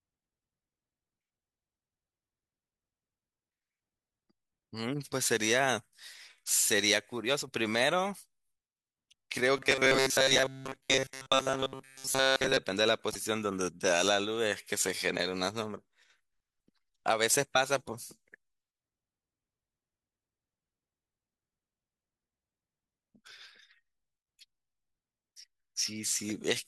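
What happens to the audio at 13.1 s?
From 13.10 to 13.16 s the speech breaks into a brief glitch, the mark of damaged data in a compressed stream: corrupt bytes make the decoder misread frames and hunt for the next header.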